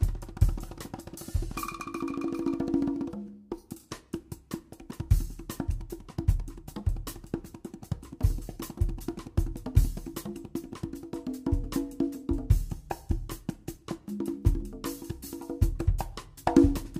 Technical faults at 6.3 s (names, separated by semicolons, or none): none